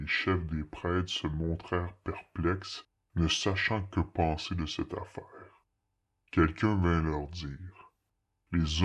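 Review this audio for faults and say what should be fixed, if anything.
The whole clip has a wrong sample rate fault. The speech plays slow and low from start to finish. Speed drops to about 0.73 of normal. Pitch falls by about 5.5 semitones. Both shift together, so the samples are being played back at a lower rate than they were captured at, with no conversion. The ratio fits audio recorded at 44.1 kHz and played at 32 kHz. To prevent it, resample to the playback device's rate, or set the device to match the file.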